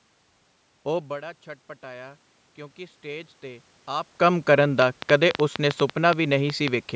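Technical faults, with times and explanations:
0.85 to 4.54 s, automatic gain rising: the input level falls by about 15 dB as the talker moves away from the microphone around 1 s. The gain control reads this as a too-quiet source and slowly raises its gain by about 10 dB over several seconds. Because the gain applies to everything the microphone picks up, the room noise swells together with the voice. This gradual lift, rather than a sudden jump, is what gives it away as gain control.
4.82 to 6.69 s, train of clicks: about fifteen short, similar pulses tick over the audio at roughly 6.5 per second, with uneven spacing. They peak well above the speech and stay clearly audible in the pauses, since they are added on top of the signal rather than being part of it. The similar shape and irregular pacing point to a likely cause in electrical interference from nearby equipment or a faulty connection or power supply injecting pulses.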